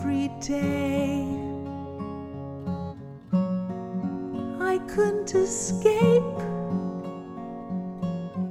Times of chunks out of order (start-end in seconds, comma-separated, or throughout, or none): none